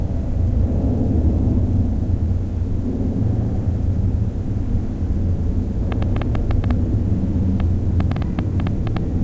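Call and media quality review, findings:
Jitter buffer speed-up, 3.63–4.60 s: sound runs about 5% fast at unchanged pitch, feels hurried. Receiver trimmed pitch-period slices, roughly 50 ms total, to drain an overfull buffer.

Train of clicks, 5.92–8.98 s: around twenty similar ticks, about 5.6 per second, unevenly spaced, roughly 15 dB above the sound, audible in gaps too. Likely nearby-equipment interference or a faulty connection or power supply, sitting on top of the G.722 path's usual 8 kHz top end.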